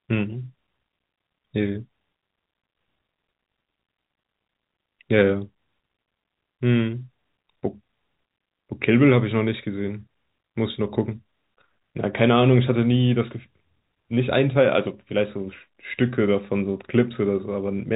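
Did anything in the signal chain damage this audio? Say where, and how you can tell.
No, nothing in the chain has damaged this speech; what you hear is ordinary G.711 telephone coding, which fits a 64 kbit/s mu-law link and leaves the band cut off at about 3.8 kHz by design.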